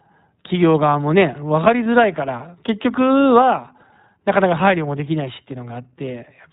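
Throughout, the speech carries the sound of the iLBC codec. Everything above 4 kHz is missing, so a spectrogram shows a hard ceiling with empty space above it. The voice is intelligible but slightly rough and synthetic, and the coding damage is plainly audible. The narrowband limit and the texture fit the 15.2 kbps mode, in which each 20 ms block of excitation is coded on its own without drawing on the previous one.

Lost iLBC frames then interrupt the speech three times: at 1.84 to 1.87 s, 3.78 to 3.81 s and 5.68 to 5.71 s. Each gap is roughly one 20 ms frame. The decoder fills each one by repeating the last pitch cycle with some noise mixed in, which sounds like a brief, faintly buzzy held vowel. A spectrogram shows short stretches of smeared, repeated harmonics, and a waveform shows similar, noise-roughened periods repeated across the gap. Because each frame decodes independently, normal speech returns straight after each gap.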